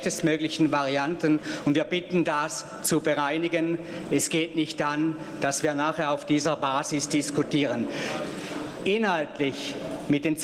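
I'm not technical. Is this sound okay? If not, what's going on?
No, it isn't quite right. All the way through there's gain pumping: loud and soft parts end up squeezed closer together in level. It's likely the recording level was set far too high and an automatic limiter keeps yanking it down, flattening everything.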